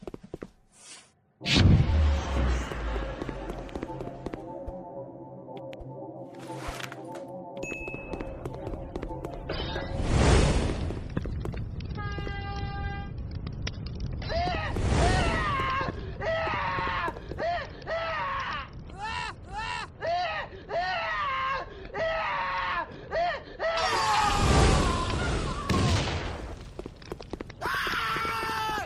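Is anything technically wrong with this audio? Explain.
No, nothing technically wrong can be heard here.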